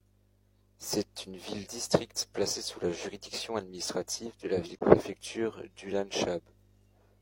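The time stamps of two adjacent stream segments fail to meet, so the player pads the missing interval with silence. This gap between stream segments falls at 4.79 to 4.81 s, just after "juridiction administrative de la", and inserts about 21 ms of digital silence with abrupt edges. The speech cuts out for an instant and resumes without losing any audio, and its position points to a boundary between segments about 6 seconds long.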